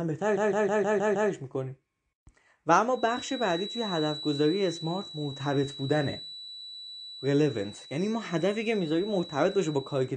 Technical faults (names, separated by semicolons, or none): MP3 compression; repeated frames; feedback whistle